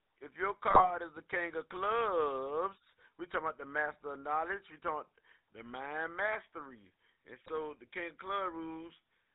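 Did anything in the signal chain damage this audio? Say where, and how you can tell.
Yes. The codec stage damaged it. The whole clip carries GSM full-rate codec coloration. The speech sounds buzzy and gravelly from start to finish. Nothing comes through above 4 kHz, so it sounds dull and narrow. The roughness fits the 13 kbit/s full-rate coder. It models the vocal tract and drives it with a sparse, regularly spaced pulse train. That coarse excitation is what makes the grain.

There are also GSM bit errors, which damaged the signal in the network stage. The first burst runs from 0.70 to 0.91 s, between "if your" and "is the king of". A shorter one runs from 7.42 to 7.51 s, just before "the king of". Each one breaks into squawks and gargling pops. Corrupted bits reached the decoder over a weak radio link. Bad filter, pitch or gain values then distorted the spectrum and level for a few frames.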